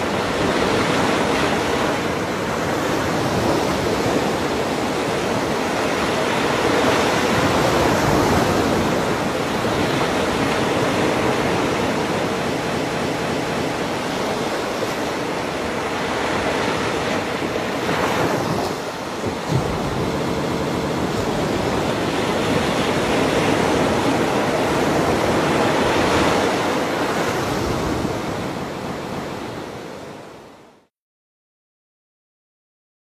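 Repeated frames occur at 12.59 to 13.70 s, 20.25 to 20.95 s and 28.80 to 29.35 s. A block of compressed audio was delivered more than once, so the decoder replays it. The first block is 278.6 ms, which fits six frames, and it plays four extra times. The second is 232.2 ms and repeats three extra times. The third is again 278.6 ms and repeats twice. Each is heard as a stutter, and together they lengthen the audio by roughly 2.4 s.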